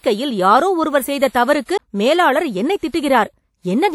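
Throughout the speech there is a washy, ringing quality, with hiss that swells and fades along with the voice. This is most likely WMA compression: a transform codec working in long blocks smears its quantisation noise over tens of milliseconds, and the damage is plainly audible at a rate that points to roughly 48 kbps. A spectrogram shows nothing above 18.2 kHz, patchy holes where weak components were zeroed, and smeared energy around onsets.

At 1.77 s, just after "யாரோ ஒருவர் செய்த தவறுக்கு", a CD skip interrupts the audio. The laser jumped to another turn of the disc's spiral, so the player muted for a very short moment and then carried on from a different place. It sounds like a tick followed by an abrupt discontinuity. The waveform shows a brief flat gap and a hard splice, and the spectrogram shows a thin vertical broadband line.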